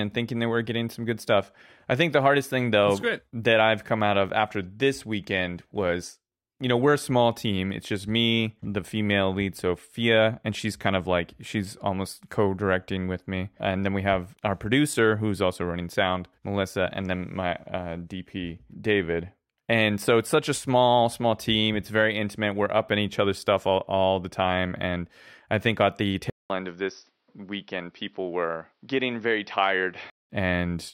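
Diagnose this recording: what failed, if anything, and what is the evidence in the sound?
Input switched to a poorer device, likely at the capture stage. After "I think at the", a 200 ms gap at 26.30 s; to 30.30 s the spectrogram empties above 5.9 kHz, the waveform shrinks about 5 dB, and a new noise floor appears.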